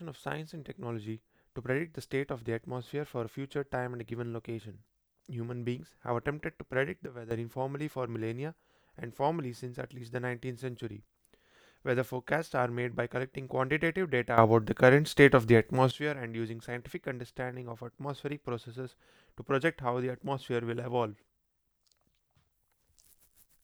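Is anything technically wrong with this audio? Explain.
Yes. There are two sudden gain jumps. From 7.06 to 7.31 s the speech and its background noise both drop by about 12 dB at once; from 14.38 to 15.91 s they rise by about 12 dB. Each is likely a digital gain change applied between consecutive samples with no ramp. On a waveform the envelope steps abruptly; on a spectrogram every band, noise floor included, darkens or brightens along a sharp vertical edge.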